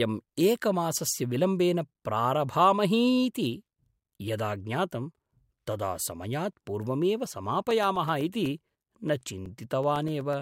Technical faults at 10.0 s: periodic USB or driver dropouts

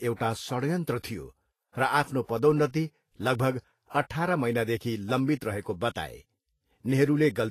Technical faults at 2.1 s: Vorbis compression

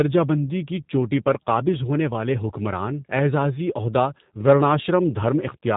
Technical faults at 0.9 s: G.729 codec

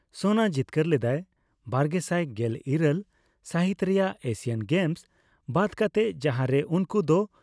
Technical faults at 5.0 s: none

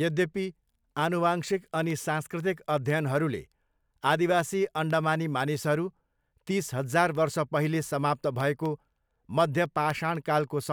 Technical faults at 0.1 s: none

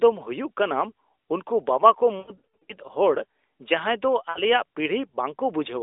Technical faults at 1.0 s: none

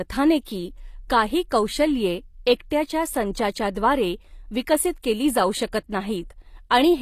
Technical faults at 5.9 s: HE-AAC compression

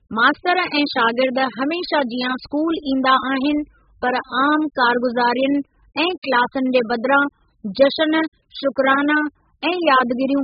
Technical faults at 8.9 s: AAC compression

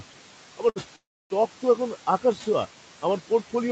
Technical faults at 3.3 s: noise suppressor artifacts

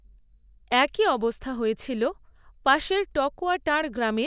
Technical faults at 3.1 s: none

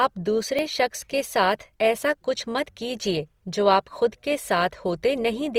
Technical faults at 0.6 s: Opus compression; dropped buffer (overrun)

